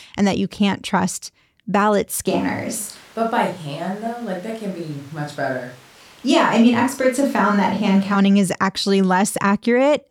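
A speech recording in which, from 2.31 s to 8.14 s, the sound turns abruptly roomy and hollow, with thinner bass and background noise roughly 30 dB below the speech, at much the same level. That points to a switch to a distant microphone, likely because the close microphone's signal dropped out.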